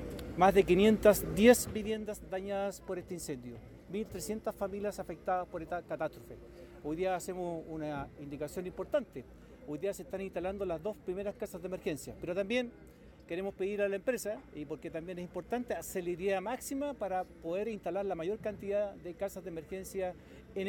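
A level drop was applied in unsmoothed 2 dB steps from 1.50 to 1.97 s, cutting the sound by roughly 10 dB at around fifteen steps a second. Each jump clicks, so zipper noise rides on the fade.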